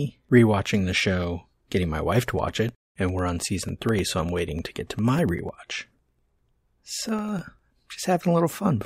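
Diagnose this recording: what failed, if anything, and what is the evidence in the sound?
Periodic USB or driver dropouts, 2.29 to 7.89 s, beginning just after "show getting my wife". Every 0.1 s about a millisecond of speech drops to silence, giving roughly fifty evenly spaced ticks. A background task stalls the USB bus or audio driver at a fixed interval.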